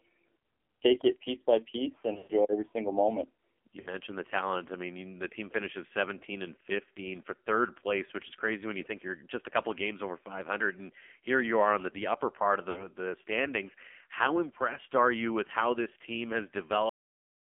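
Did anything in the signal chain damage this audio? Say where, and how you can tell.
Yes. At the codec stage, the whole clip carries AMR narrowband mobile codec damage: the speech sits in a 250 Hz to 3.4 kHz band, nothing above 4 kHz survives, and the voicing is heavily buzzy and synthetic, consistent with a low mode around 5.9 kbps. Plain band-limiting would stay clean; this has a coded, artificial edge.

On the radio link, lost AMR speech frames appear three times. At 2.14 to 2.32 s, between "it piece by piece" and "every single moment", about 140 ms goes missing in scattered frames, the longest run about 120 ms, and the sound smears and fades. At 3.80 to 3.89 s, before "the talent I mean", and at 12.70 to 12.89 s, before "the standings", shorter 60 ms losses warble briefly. Held, decaying pitch rather than sharp gaps separates this from packet dropouts.

During storage or playback, the file has a cut-off end at 16.89 s. 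The speech stops mid-sound and falls straight to digital silence with no decay. A fade or natural pause would taper off; here the final buffers were simply never written.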